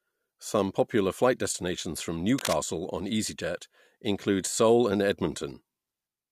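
A speech clip with one burst of cable scratch noise from 2.38 to 2.53 s, right after "popular flight destinations from". It's a short stretch of dense, ragged rustling sitting only a little below the speech, likely a worn cable or connector being moved.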